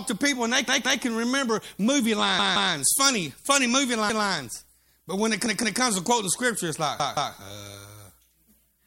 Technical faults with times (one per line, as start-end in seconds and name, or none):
0.68-1.02 repeated buffer
2.39-2.73 repeated buffer
5.46-5.80 repeated buffer
7.00-7.34 repeated buffer